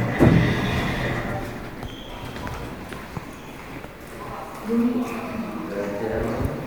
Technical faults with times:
none

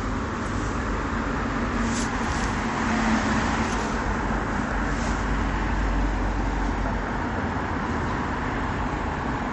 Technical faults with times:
0.00-9.52 MP3 compression

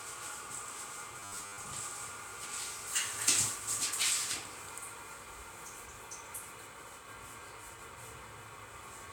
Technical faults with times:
1.20-1.64 robotic sound from repeated short buffers

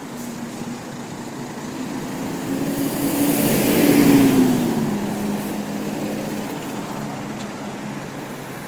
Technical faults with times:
0.00-8.68 Opus compression

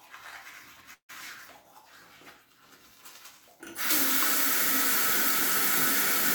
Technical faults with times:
0.93-1.11 long network dropout

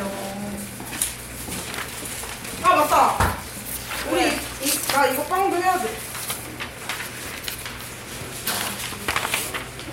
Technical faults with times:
none

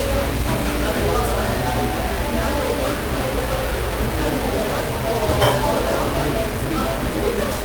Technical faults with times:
0.00-7.64 stuck bit

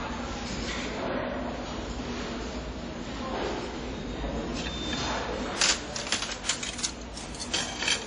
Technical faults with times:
0.00-8.07 WMA compression

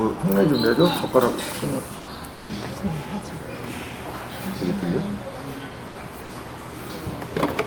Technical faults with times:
1.99-2.05 sound dropped by the voice detector
2.35-2.47 sound dropped by the voice detector
5.89-5.95 sound dropped by the voice detector

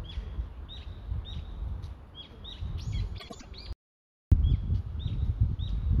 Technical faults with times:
3.19-3.45 frames out of order
3.73-4.32 audio dropout to silence

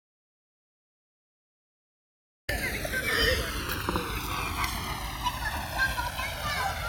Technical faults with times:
0.00-6.88 channels drifting apart
0.00-2.48 audio dropout to silence

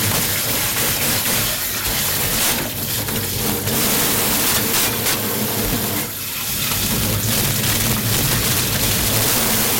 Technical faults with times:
0.00-9.79 integer overflow

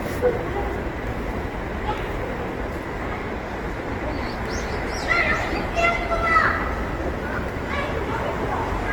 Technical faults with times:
0.00-8.92 generation loss

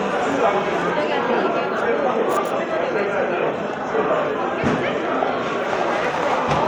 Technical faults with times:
none

